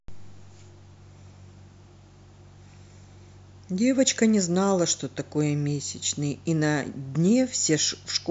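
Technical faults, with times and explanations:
No technical faults can be heard in this speech.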